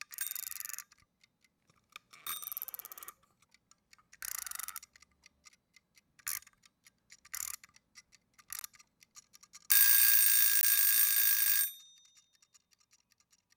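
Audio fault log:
8.59 s and 10.61–10.63 s: gap between stream segments. Two hard-edged holes of silence, each about 18 ms, interrupt the sound. They fall 2 s apart, where segment timestamps leave a small gap. The player fills each gap with silence. No audio is lost.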